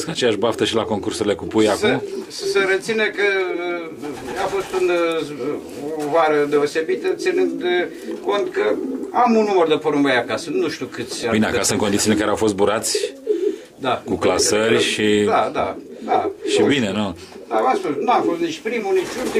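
At 11.23 s, compressed frames are skipped: about one frame, fitting a 20 ms frame length, never reaches the output, so the sound jumps ahead by roughly 20 ms. On a waveform the envelope shifts abruptly with no gap. A spectrogram shows a thin vertical smudge where the traces break and resume slightly out of step.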